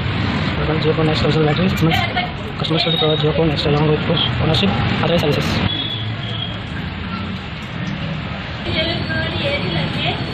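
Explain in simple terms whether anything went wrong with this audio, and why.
Nothing went wrong with this audio that a careful listener can pick out. There is no moment where the sound breaks, stumbles or changes in a way that points to a technical problem.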